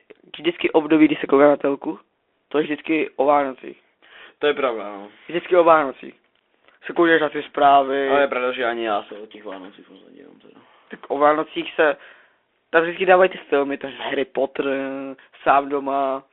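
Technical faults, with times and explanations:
Throughout, Bluetooth CVSD headset codec: speech is squeezed into a 300 Hz to 3.5 kHz band, and the one-bit up/down steps lag loud high sounds, scratching s sounds over granular hiss.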